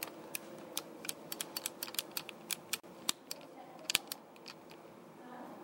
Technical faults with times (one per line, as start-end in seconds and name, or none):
2.80-2.83 gap at a join of encoded pieces